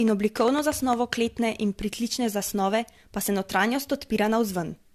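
A speech recording that has likely been run through an AAC-LC encoder at 64 kbit/s about three times over shows generation loss across its whole length. Each fresh encode quantises again on a shifted frame grid, so the coding noise and spectral gaps build on one another. The speech comes out swirly and hollow, with a smeared quality beyond what that bitrate would produce in a single pass, and consonant onsets lose their edge. From 0.08 to 0.94 s, ending just before "kletne in", a train of clicks sits over the sound, likely from a faulty connection or interference from nearby equipment. About seven similar pulses arrive at an uneven pace of roughly seven per second. They stand out at about 15 dB above the speech, so the ticking is plain even in the gaps. Dropped samples occur at 0.57 s, at 2.11 s between "kletne in" and "zasnove pa se", and at 4.44 s. Each time, a couple of samples have likely gone missing from the stream, a gap far too brief to remove any audible sound. 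The waveform jumps straight to a later value, which is heard as a single sharp click and would show as a thin vertical line on a spectrogram.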